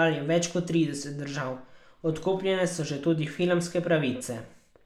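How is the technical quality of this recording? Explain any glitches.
Listening through the recording, nothing technical stood out as a glitch or problem.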